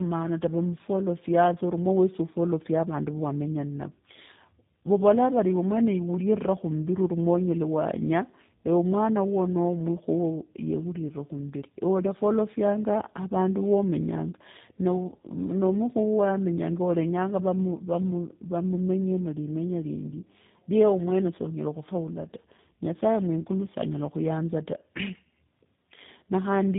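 From start to finish, the speech shows tandem speech coding. Two low-rate speech codecs run in sequence, fitting GSM full rate then G.729A. Each recodes the last one's damage. Nothing reaches above 3.8 kHz, so speech sounds muffled, rough and warbly.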